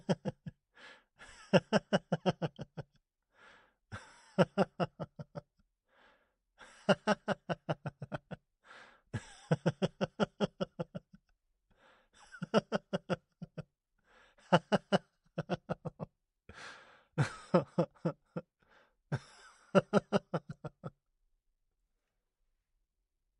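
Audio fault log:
Nothing stood out on listening to this audio.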